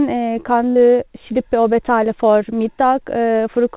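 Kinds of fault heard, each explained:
Burst of packet loss: at 0.70 s, 60 ms of speech vanishes, bridged by a fading repeat that shows as smeared, decaying energy on the spectrogram.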